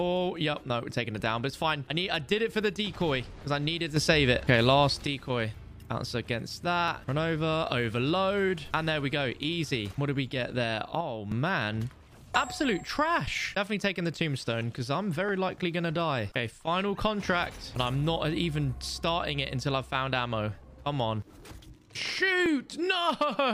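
At 3.97 s the level jumps up about 7 dB, background included, until 5.07 s. At 11.01 s it drops about 6 dB until 11.31 s. Both are sudden gain jumps, likely from gain applied without a ramp.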